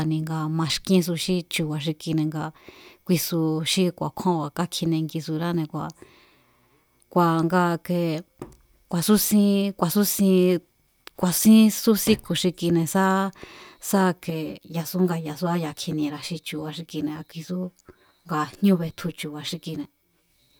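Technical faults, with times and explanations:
14.3–20.3 s, channel delay (comb filtering): the speech turns hollow and phasey as one channel lags about 10 ms, so summing cancels evenly spaced frequencies from around 50 Hz up.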